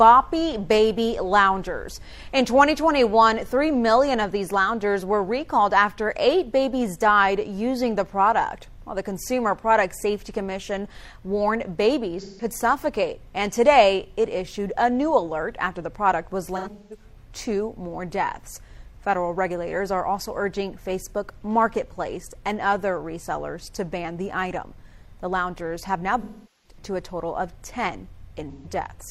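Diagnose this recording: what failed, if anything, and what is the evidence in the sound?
Codec stage: AAC frame loss with concealment. At 12.21–12.45 s, 16.56–17.04 s, 26.21–26.77 s and 28.51–28.66 s the sound turns smeared and noisy where 128 to 427 ms went missing. The decoder rebuilt each gap from the last good spectrum with scrambled signs or interpolated energy.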